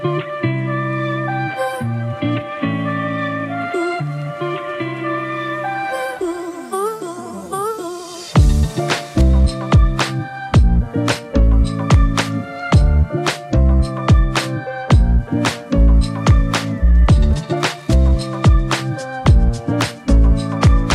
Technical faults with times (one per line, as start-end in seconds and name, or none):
none